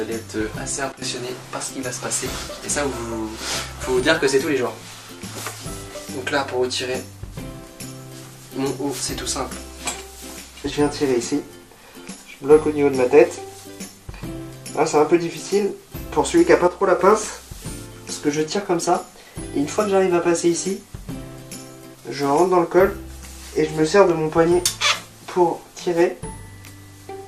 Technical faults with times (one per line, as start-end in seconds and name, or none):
0.00-27.27 MP2 compression
0.92-1.02 sudden gain jump
4.18-4.70 drift correction step
16.68-16.99 sudden gain jump